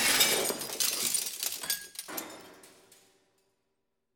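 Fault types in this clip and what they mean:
Nothing stood out on listening to this audio.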